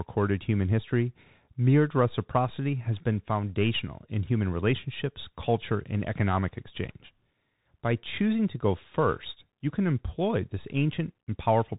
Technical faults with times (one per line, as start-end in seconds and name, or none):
0.00-11.79 Bluetooth CVSD headset codec